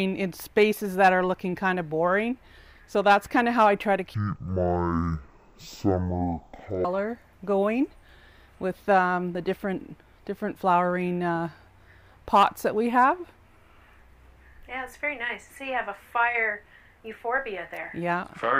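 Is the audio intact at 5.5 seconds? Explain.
No. Stereo read as mono runs from 4.14 to 6.85 s, covering 5.5 s. The left and right samples are taken in turn as one channel, so the sound plays at half speed and an octave low, with a fainter mirrored copy in the upper spectrum.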